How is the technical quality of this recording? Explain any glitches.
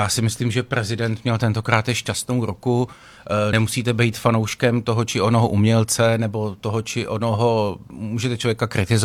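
The recording has one glitch, at 3.49 to 3.53 s: compressed frames skipped. Whole frames of the encoded stream never reached the output, so the audio jumps ahead by roughly 50 ms.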